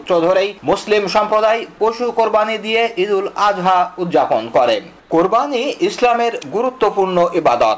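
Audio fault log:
5.00–5.10 s, comfort noise in place of the background: for about 100 ms the room tone gives way to a smooth, featureless hiss about 4 dB quieter, its detail gone. The likely cause is discontinuous transmission: the sender stopped sending audio during a pause, since the background sits about 33 dB below the loudest parts, and the receiver filled the gap with synthetic noise roughly matching the background's spectrum. Band-limited like the rest, with nothing above 8 kHz through the G.722 call path.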